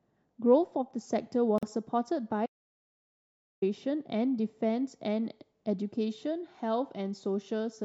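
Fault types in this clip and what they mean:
Gap at a join of encoded pieces: at 1.58 to 1.63 s the speech breaks for about 44 ms, with smeared edges, then resumes where it stopped. Separately encoded pieces, apparently about 6.0 s long, were joined untrimmed, leaving encoder delay and end padding.
Audio dropout to silence: from 2.46 to 3.62 s the speech cuts out mid-flow into digital silence with no room tone, and about 1.16 s of speech is gone. The likely cause is a lost input while the recorder kept writing silence.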